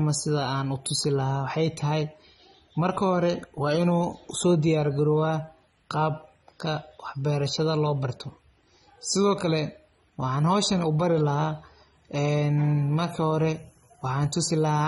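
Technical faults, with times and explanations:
Throughout, AAC compression: the speech is dull and smeared, with a fizzy, warbling texture on sibilants and held sounds, and nothing is heard above about 11.5 kHz. The likely cause is an AAC-LC encoder running short of bits, which fits a bitrate near 24 kbps. To save data it lowers the cut-off and quantises each frame's frequency lines coarsely against a hearing model, so fine detail is lost and the remaining bands shimmer as they change between frames.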